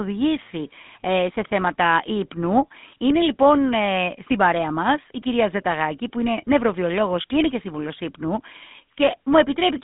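Start to finish, the speech has that GSM full-rate codec grit: buzzy, gravelly pulse excitation, a 150 Hz to 3.6 kHz line band, and nothing above 3.8 kHz, consistent with 13 kbps coding.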